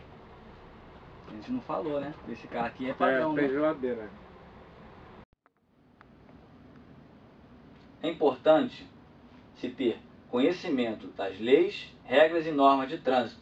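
Nothing in the signal points to a technical fault at any point in the recording.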